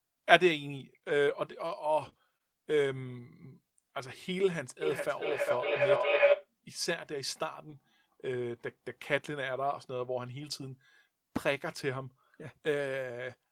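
Between 0.77 and 1.71 s, four brief patches at 0.77, 1.09, 1.27 and 1.69 s are lost packets rebuilt from error correction: each 20 ms frame was replaced by the low-bitrate copy carried in the following packet, so nothing drops out, but the sound turns momentarily rougher and noisier. On a spectrogram these show as thin grainy columns with a smeared harmonic structure.

Interleaved with them, at 0.99 to 1.03 s, 1.25 to 1.29 s, 2.09 to 2.13 s and 2.37 to 2.42 s, are short concealed packet losses. Each time, 20 ms of audio arrived too late and the decoder extended the preceding sound, then blended back in. The result is a quick smear or wobble.

From 4.82 to 6.51 s a feedback howl builds. Two devices share a room, so the loop from microphone to loudspeaker adds gain on each pass. It narrows to a tone around 500 Hz, pulsing roughly every 0.4 s and peaking about 6 dB above the speech. A spectrogram shows a bright horizontal line thickening in regular bursts.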